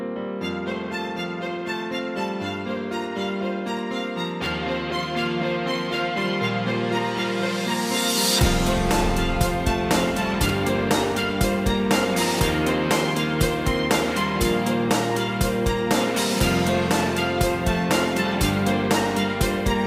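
At 4.44 to 4.46 s there is a brief jumbled moment. This is chunks out of order. One 10 ms block of audio plays one block late, after the block that should follow it. Nothing is missing, but the sequence is swapped. Three hard joins result. A longer garble follows at 10.46 to 10.5 s. Here a 10 ms block lands three blocks late. The scramble spans more material.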